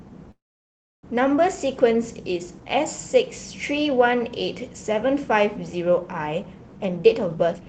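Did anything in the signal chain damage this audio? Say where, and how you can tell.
Yes. From 0.31 to 1.05 s there is a call audio freeze at the network and jitter-buffer stage. The sound stalls, a brief tail of the last sound trails off, then about 0.66 s of silence follows, and the audio picks up exactly where it stopped. Unlike packet-loss concealment, nothing is skipped: about 0.72 s is inserted and everything after runs that much later. That points to delayed, not lost, packets, which likely drained the buffer.

From 6.77 to 7.66 s a jitter buffer speed-up occurs at the same buffer stage. The sound runs at about 142% of normal rate yet keeps its pitch, so roughly 0.4 s is trimmed away. That rules out a sample-rate mismatch or resampling error, which would raise pitch along with speed. Instead the receiver is cutting short pitch-period chunks repeatedly to shrink the backlog. The Opus call path itself, limited to about 8 kHz, is audible as its usual band limit.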